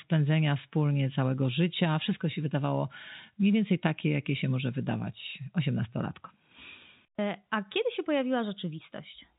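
Nothing stood out on listening to this speech, which comes through the narrow band of G.711 telephone coding with nothing above about 3.8 kHz.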